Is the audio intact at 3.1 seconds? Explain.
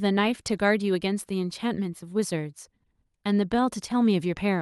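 Yes, at 3.1 seconds the speech plays through cleanly, with no dropout, click or other fault.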